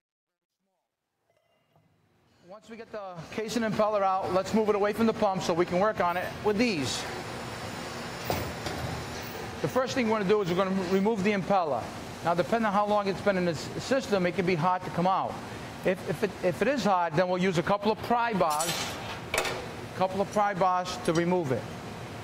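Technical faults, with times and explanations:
0.00–3.75 s, truncation distortion on a fade: the fade-in starts gritty, worst from 0.00 to 2.19 s, then clears as the level rises to 3.75 s. The gain stage rounds each sample to too coarse a step without dither, which fits a 12-bit stage, so at low levels the waveform collapses into a few square steps.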